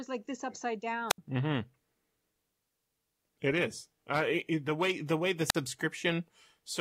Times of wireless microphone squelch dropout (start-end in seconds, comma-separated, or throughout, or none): 1.09-1.18, 5.48-5.55